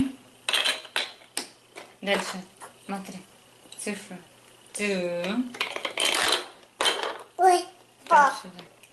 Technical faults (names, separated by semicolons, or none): clock drift between sender and receiver; repeated timing corrections; short stall from a late packet